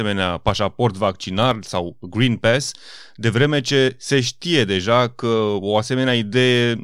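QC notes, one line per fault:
1.43–1.54 s, loud pop: two sharp pops in quick succession, a few dB above the speech, which carries on underneath; likely a voltage spike from a plug or switch.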